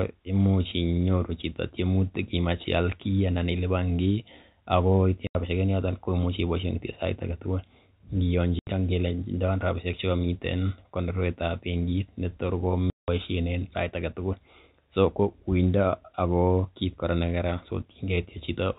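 At 5.27 s, right after "ilipan kiy ago itinye", the speech falls into dead silence for 80 ms, then again at 8.59 s for 80 ms and at 12.9 s for 180 ms. This is packet loss filled with silence: missing audio is replaced by nothing, and each gap is a whole multiple of 10 ms, which fits 10 ms packets. Unlike concealment, no sound is stretched into the holes. The edges cut abruptly within the G.711 telephone band.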